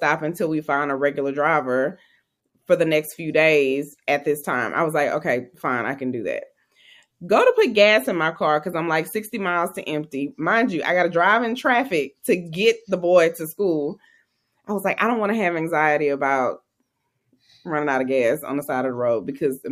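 No technical faults can be heard anywhere in the speech.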